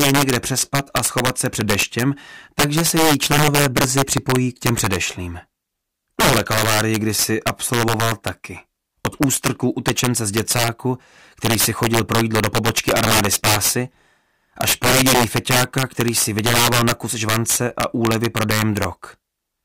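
Throughout the clip, integer overflow breaks up the loudest moments. The signal was pushed about 11 dB past full scale, and instead of being held at the limit, samples that exceeded the largest integer wrapped around to the opposite extreme. Only around two percent of samples go over, but each one produces a harsh, violent crack far sharper than ordinary clipping. On a waveform the peaks jump abruptly from top to bottom rail. A spectrogram shows bright full-band vertical streaks at each loud peak.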